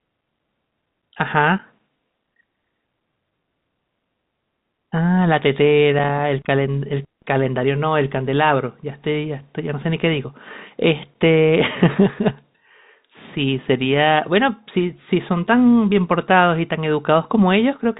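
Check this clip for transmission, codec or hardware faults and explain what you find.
No faults found here.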